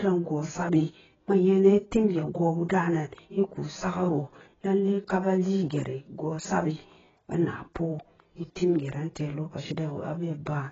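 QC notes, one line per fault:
Throughout, AAC compression: the speech sounds dull and smeared, with nothing above about 7.6 kHz and a warbling, fizzy texture on sustained sounds and sibilants. This is likely heavy AAC-LC coding. At a very low bitrate, which here fits something in the low teens of kbps, the encoder drops the top band and quantises each frame's spectrum so coarsely that gaps appear and shift from frame to frame.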